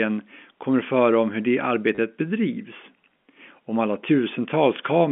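A speech clip carried over a G.711 telephone line, so the spectrogram has no energy above 4 kHz and the sound is narrow and phone-like. The fault is packet loss with the last packet repeated, from 1.95 to 1.98 s. About 30 ms of audio went missing, which fits three lost 10 ms packets. The receiver replayed the last good packet to fill the gap. The run gives a brief robotic stutter. On the waveform it shows as the same short segment copied end to end with small jumps at each join. On the spectrogram it appears as a thin vertical patch of identical repeated slices.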